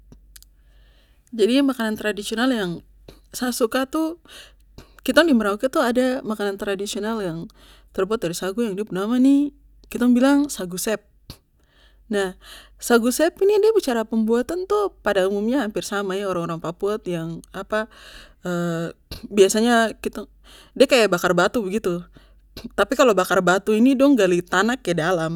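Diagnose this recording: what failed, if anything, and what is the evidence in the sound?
Nothing failed; the speech shows no fault anywhere.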